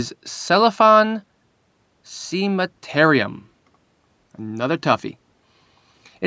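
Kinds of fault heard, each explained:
No faults can be heard anywhere in this speech.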